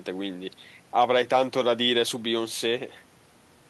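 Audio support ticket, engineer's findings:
No faults found in this speech recording. Nothing in the audio calls for further action on this ticket.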